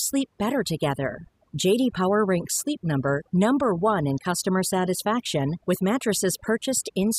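Overdone noise removal runs through the whole speech recording: an aggressive noise reducer pushed individual frequency bands down or out wherever they sat near its noise estimate, taking quiet parts of the voice too. The background drops and breaks up into twinkling specks. On a spectrogram this shows as scattered isolated dots between words and ragged, hollowed-out gaps in the voice's upper detail.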